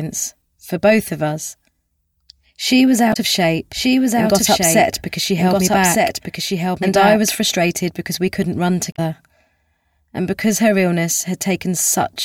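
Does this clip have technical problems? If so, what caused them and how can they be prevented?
Yes, there are two kinds of fault. There's damaged data in a compressed stream at 3.10 to 3.17 s and again at 8.92 to 8.99 s, each a short glitch of about 70 ms. Part of the encoded stream got corrupted there, so the decoder couldn't read those frames properly, lost its place and had to hunt for the next valid frame header before playback settled. To prevent it, transfer and store files with checksums and keep metadata out of the audio payload.

From 3.73 to 7.31 s there's a doubled audio track. A second full-band copy of the sound runs about a second behind the original at roughly 5 dB quieter. It has no reverb tail or room colouring, and it cuts in and out abruptly at those times. The likely cause is the same source being captured twice, once through a slower path, or an edit that left two offset copies stacked on top of each other. 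To prevent it, check the routing so each source reaches the mix only once, and scan edits for overlapping duplicate regions.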